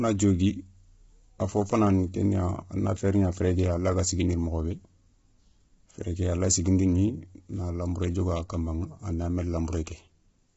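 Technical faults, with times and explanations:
Throughout, low-delay AAC compression: speech is rough and grainy, harmonics smeared by short frames. Nothing above 7.7 kHz. Likely AAC-ELD near 16 kbps.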